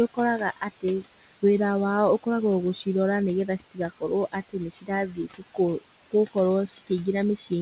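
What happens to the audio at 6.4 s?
At 6.4 s the noise suppressor artifacts are present, as they are across the whole clip. The suppressor pulls steady-noise bands down by about 15 dB frame by frame, so the room noise dips between words and swells back under speech. Unlike a gate, it never fully mutes the noise.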